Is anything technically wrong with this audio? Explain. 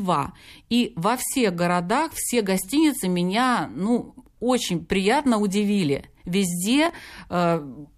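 Yes. From 6.86 to 7.02 s there is processor overload crackle. The processor fell behind, and a run of roughly five missed buffers, which fits buffers of about 5 ms, were filled with stale audio, giving gritty tearing. A spectrogram shows clustered vertical broadband streaks, and the waveform shows jagged discontinuities.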